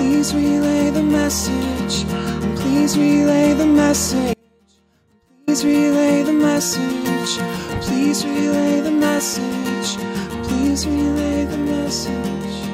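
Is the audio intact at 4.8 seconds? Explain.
No. An audio dropout to a faint residue runs from 4.34 to 5.48 s, likely a live path losing its feed. The waveform collapses abruptly to a thin trace about 35 dB down, showing as a pale spectrogram gap.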